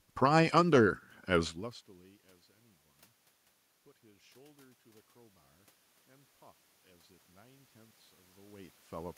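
From 6.07 s to 8.8 s the automatic gain rises: the gain control, judging the input too quiet, lifts its level by about 3 dB over nearly three seconds. Voice and room noise swell together, which separates it from a talker moving closer, where only the voice would grow.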